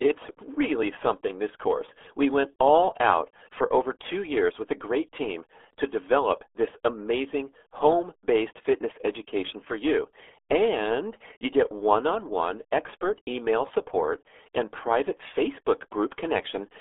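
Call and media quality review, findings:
RealAudio 14.4 codec damage, whole clip. Muffled, gargly speech. Spectrogram: hard ceiling near 3.6 kHz, empty above, energy sitting in a 300 Hz to 3.4 kHz telephone band, smeared blocky formants. Waveform: soft, rounded transients. Probable component: low-rate RealAudio 1 encode, consistent with an 8 kbit/s dial-up speech codec. Mechanism: heavy parametric coding discards high band and fine spectral detail.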